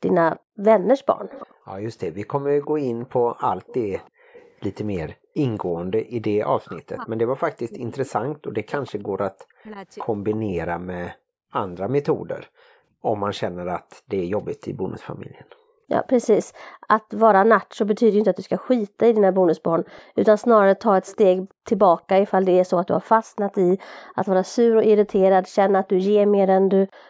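From 0.33 to 4.5 s there is an echo leak. A faint, delayed copy of the speech trails about 325 ms behind the original, roughly 25 dB quieter. The far side's echo canceller likely let its loudspeaker sound slip back through the microphone. The same echo returns from 7.73 to 24.14 s, at the same delay and level.

Speech suppressed in double talk occurs at 2.69 to 2.9 s, 6.58 to 9.78 s and 18.21 to 18.25 s. The speech dips steeply, by around 40 dB. The middle stretch loses about two seconds in total. The canceller likely treated the overlapping talk as echo and turned it down.

From 27.01 s to the end, the background is gated by the echo canceller. The room sound drops out suddenly, by about 40 dB, for a brief moment. The canceller clamped the microphone while its loudspeaker was playing. The band, cut off at 8 kHz by the call's microphone processing, plays no part in this.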